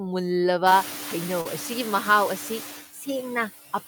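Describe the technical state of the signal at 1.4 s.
At 1.41 to 1.47 s there is a short concealed packet loss: about 40 ms never arrived, and the receiver filled the gap by extending the preceding sound before blending back, leaving a brief smear rather than a hard dropout or click. Throughout, noise suppressor artifacts pull the background down by about 6 dB, so the residual noise pumps with the speech instead of sitting steady like the room noise itself.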